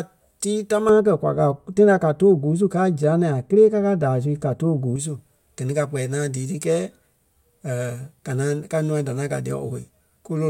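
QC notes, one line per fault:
0.89–4.96 s, de-emphasis applied wrongly: a treble cut meant to reverse pre-emphasis hits audio that never had it, or is applied twice, so highs fall smoothly, about 11 dB down at 10 kHz relative to 1 kHz, and the speech turns dull and muffled. A spectrogram shows energy thinning progressively above a few kHz across this stretch.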